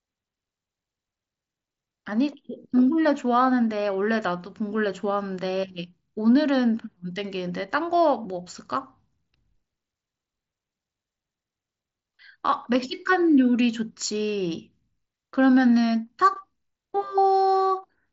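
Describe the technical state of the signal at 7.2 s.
At 7.2 s the speech is intact, carried normally through the Bluetooth mSBC headset codec with nothing above about 7.7 kHz.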